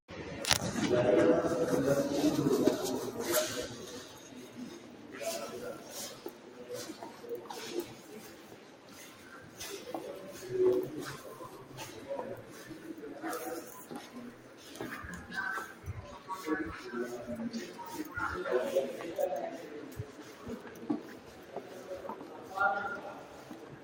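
Across the whole clip the level pumps and flutters: sharp onsets arrive intact, but anything sustained or decaying keeps sinking and recovering, with the gain swinging by roughly 15 dB. That is a noise suppressor applied to music or sounds. A processor tuned for speech is treating steady, non-speech content as background noise and pulling it down between transients, so tails are trimmed and the texture thins out.

In seven stretches the sound audibly sags further, by up to about 6 dB, and its fading parts die away early. These fall at 4.16 to 5.14 s, 5.78 to 6.66 s, 7.93 to 9.59 s, 12.43 to 12.58 s (a brief dip of about 4 dB), 14.07 to 14.63 s, 19.57 to 22.52 s, and 22.97 s to the end. Each is sound cut by the noise suppressor. The held material there was scored as noise and attenuated harder than its surroundings.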